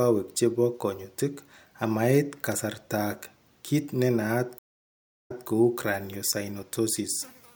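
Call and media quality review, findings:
Stream reconnect, 4.59–5.47 s, after "amait kasaratak kiit nenaat". Dropout of about 0.7 s, then speech resumes 0.18 s earlier, repeating a fragment. Connection loss in the streaming client. Player reconnected, server resent a burst, fresh decoder started mid-stream.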